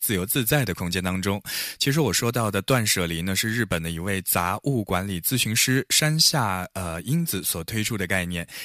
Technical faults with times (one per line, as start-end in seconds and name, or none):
none